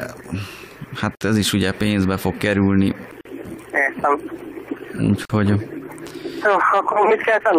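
Short dropouts of silence cut into the sound at 1.15, 3.21 and 5.25 s, about 58, 43 and 43 ms long, two seconds apart. These are gaps at joins of encoded pieces, where untrimmed encoder delay and padding were left in.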